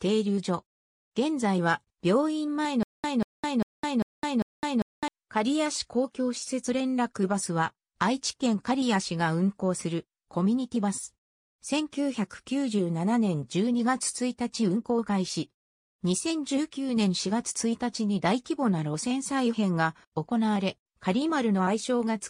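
At 2.83 to 5.08 s, a stutter with silent gaps repeats one 190 ms burst five times between 208 ms of digital silence. Unlike a dropout's single hole, this is likely a stalled stream replaying its last fragment.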